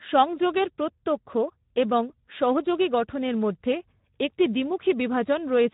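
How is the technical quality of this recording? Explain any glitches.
The recording is degraded by plainly audible Speex codec damage throughout, from start to finish. Speex is a CELP speech codec that models the voice with a vocal-tract filter and a coded excitation signal. Here the excitation gets too few bits, so the speech sounds hoarse and grainy. That fits a low setting around 11 kbps. Nothing is present above about 3.8 kHz. A simple low-pass filter would dull the sound but leave it clean; here the roughness sits inside the voice itself, which points to a parametric speech codec rather than to band-limiting alone.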